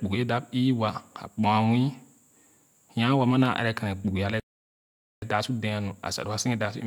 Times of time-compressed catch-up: 5.22-6.86

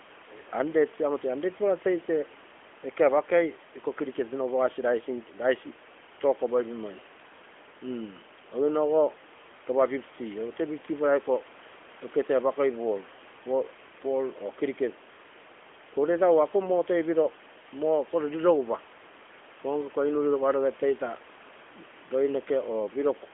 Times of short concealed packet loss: none

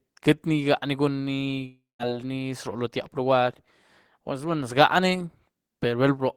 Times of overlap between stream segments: none

